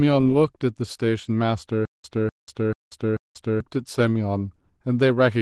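Opus voice compression runs through the whole speech clip, and the damage is plainly audible. The lower band sounds linear-predicted, with a coded layer above 8 kHz. The coarse, slightly hoarse and robotic texture fits hybrid-mode Opus at roughly 16 kbps with 20 ms frames.

A stutter with silent gaps runs from 1.85 s to 3.60 s. The same 0.25 s burst plays four times, each followed by about 0.19 s of digital silence, repeating every 0.44 s. The likely cause is a stalled stream replaying its last fragment, so the audio due in that stretch is lost.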